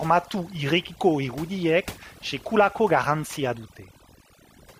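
Throughout the speech, overdone noise removal is at work: the suppressor cuts frequency bands near its noise estimate hard, taking soft parts of the voice too. Gaps fall to near silence with twinkling specks, and a spectrogram shows scattered isolated dots between patchy, hollowed harmonics.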